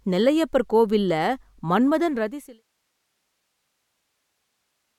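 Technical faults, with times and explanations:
Nothing stood out on listening; the speech fades smoothly out from around 2 s to 2.64 s.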